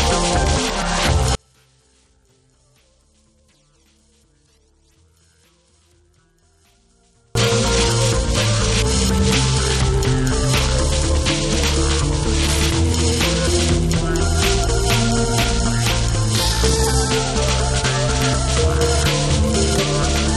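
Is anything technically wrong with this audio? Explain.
Yes. One channel inverted, from 1.35 to 7.35 s: the sound drops by about 40 dB and almost disappears, likely because one stereo channel has reversed polarity. The material shared by both channels cancels when they are summed to mono, leaving only a faint residue of their difference.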